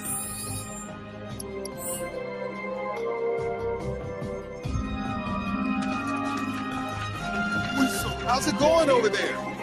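A noise suppressor built for speech runs across the whole clip, treating steady, sustained parts of the sound as noise and pulling them down while sharper attacks pass. The gain swings by about 5 dB, so the sound pumps and thins, unlike simple compression, which responds to level rather than to steadiness.

From 0.84 to 1.5 s, the suppressor cuts a sound it mistook for noise, dropping it by up to about 6 dB. The sound sinks in level. A second, shorter cut at 4.41 to 4.65 s pulls the sound down by up to about 5 dB for roughly a fifth of a second. Unlike a dropout, the sound never vanishes. It dips and recovers.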